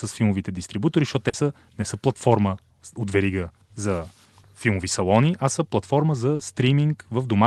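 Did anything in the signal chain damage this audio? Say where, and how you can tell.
Yes. Short concealed packet loss at the network stage occurs at 1.29–1.35 s, after "филмовите дистрибутори защото", and at 6.35–6.41 s, after "салони а са платформа". Each time, 40 ms of audio arrived too late, so the receiver stretched the preceding sound to fill the gap and blended back, leaving a brief smeared wobble.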